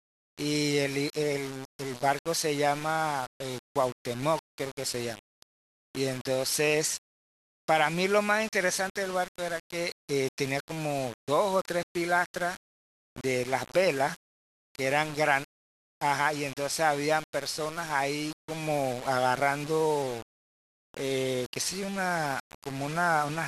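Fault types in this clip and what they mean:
Low bit depth without dither: The speech was likely requantized to very few levels, which fits roughly 5 bits, by rounding with no dither to break up the error. Because the rounding error tracks the waveform, it sounds like a harsh, grainy distortion that shifts with the speech throughout, sitting only about 15 dB below it. Quiet stretches and soft word endings turn gritty, and the faintest parts sputter or cut to silence.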